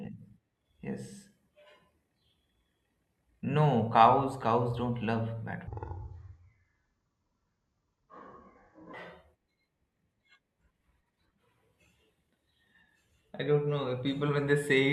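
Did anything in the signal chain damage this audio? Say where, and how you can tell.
Yes. A section at the wrong speed runs from 5.67 to 8.94 s, where the speech drops to about 0.53 times normal speed and sinks roughly ten semitones, slow and deep together. The likely cause is an editing or playback stage running that stretch against the wrong clock.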